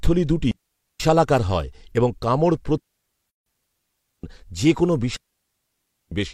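At 0.51 s the speech falls into a clean hole of near silence lasting about 0.49 s, with no burst of noise at either edge, before resuming on "হয় এবং কামড়". This is a digital wireless dropout: the receiver lost too much data and muted itself with a very brief fade. It happens again after "হয় এবং কামড়", from 2.78 s to 4.24 s with about 1.3 s of muting, up to "যে কোনো". It happens a third time after "যে কোনো", from 5.16 s to 6.12 s, muting for about 0.95 s.

Inside that second dropout, from 3.30 s to 3.46 s, there is a 160 ms gap with smeared edges. This is a gap at a join of encoded pieces. The audio was encoded in separately made segments, and the join here falls on a 4 s spacing. The encoder's start-up delay and the padding in its final frame were left in when the pieces were joined, which leaves a short silent slot before the sound carries on from where it stopped.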